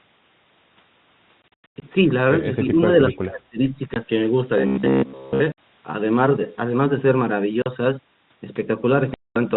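From 1.42 to 1.82 s, packet loss filled with silence chops the speech. About 280 ms goes missing in scattered gaps, the longest about 100 ms, in steps that fit 20 ms packets. The waveform shows flat silent stretches with vertical edges, and the spectrogram shows blank columns. The same holes recur at 3.94–3.96 s, 5.52–5.58 s, 7.62–7.66 s and 9.14–9.36 s, the last one about 220 ms long.

Between 2.65 and 2.86 s the speech level dips by about 5 dB in brief patches, and from 3.1 to 3.59 s it drops by up to about 25 dB, in pieces totalling roughly 300 ms. This is likely speech suppressed in double talk: an echo canceller, unable to tell the near talker from loudspeaker echo, attenuated everything. It looks like the envelope pinching inward.

Inside that first dip, at 2.79–2.83 s, a faint echo leak appears: a copy of earlier speech delayed by about 246 ms and sitting about 35 dB below the voice. 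This is residue the far-end canceller likely failed to remove. It shows as a weak, smeared repeat of earlier formant shapes.

From 4.58 to 5.40 s the audio turns into a rigid metallic buzz. This is robotic sound from repeated short buffers, likely caused by a roughly 15 ms chunk being replayed to cover late audio, for most of that stretch. The spectrogram shows evenly spaced horizontal harmonics at 66.7 Hz, the repetition rate, and the waveform shows identical repeating cycles.

The telephone coding limits the band to 4 kHz throughout, so the spectrogram is empty above that line.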